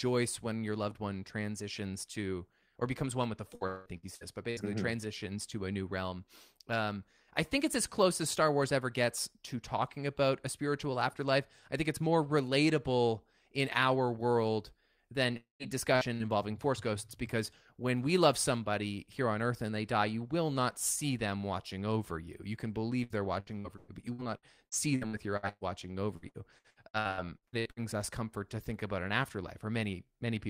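From 3.55 to 4.60 s, just after "becomes one with the", there is repeated packet loss with a robotic sound. The speech breaks up five times. Each hole is patched by stretching the last sound, so it turns choppy and robotic. About 0.42 s of speech is lost in all. The longest gap runs 187 ms. Patched sound fills about 40 percent of the stretch.

At 15.37 s, right after "in our world than", the last sound is held and fades. It then drops to near silence, about 0.13 s of it. Speech returns at 15.63 s with roughly a quarter second gone. This is likely a long network dropout.

Two short bursts of packet loss follow, at 15.96 to 16.09 s and 16.14 to 16.23 s. Each removes about 60 ms. The receiver holds the last sound and lets it fade. A brief fading fill replaces the missing bit. Then speech jumps forward.

Repeated packet loss returns from 23.04 to 25.64 s. There are eleven gaps, the longest 123 ms. 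About 0.78 s is missing, and about 30 percent of the span is patched. From 26.16 to 27.98 s, just before "us comfort to think", twelve more gaps hit. They are shorter, none over 66 ms. They still conceal about 38 percent. The result is choppy, robotic sound.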